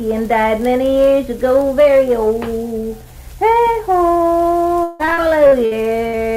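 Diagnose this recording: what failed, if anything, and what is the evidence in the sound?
Repeated packet loss (robotic sound) at the network stage, 4.83 to 6.15 s: six gaps, longest 159 ms, patched by extending prior sound, giving choppy, robotic output.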